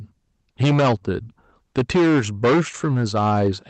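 The speech is driven about 13 dB beyond what the signal path can pass throughout, so roughly a tenth of the samples have their peaks cut flat. This hard clipping adds dense upper harmonics up to the call codec's 8 kHz limit, heard as a harsh fuzz on every loud syllable.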